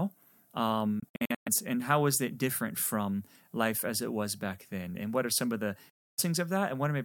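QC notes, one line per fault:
0.99–1.48 s, Bluetooth dropout: audio packets likely failed to reach the headphones in time and were discarded, leaving several short silent holes with abrupt or briefly faded edges, 279 ms in all and the longest 116 ms, just before "and how is it". The sound resumes as though it had kept playing.
5.90–6.20 s, Bluetooth dropout: the wireless link likely lost packets again, about 279 ms worth, which fits roughly a dozen frames, just after "are some of the". The output cuts to silence, then picks up further along, with the missing stretch skipped rather than delayed.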